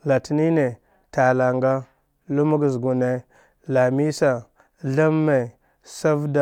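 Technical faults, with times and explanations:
No technical faults can be heard anywhere in the speech recording.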